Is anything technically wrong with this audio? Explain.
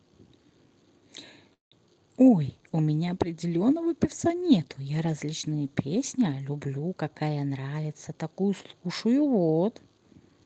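Yes, there are two faults. At 1.53 to 1.73 s there is a call audio freeze. The sound stalls into a fading buzz, then about 140 ms of silence. The speech then resumes where it stopped. This is likely from delayed packets emptying the jitter buffer.

From 2.36 to 6.47 s there is a call bitrate drop. The Opus stream falls from 40 to 18 kbps, so the coarser coding makes the speech rougher and more watery. The call path normally carries audio up to 8 kHz.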